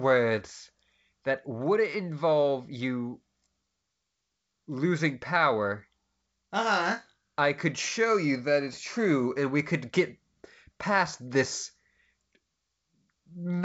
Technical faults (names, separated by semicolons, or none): none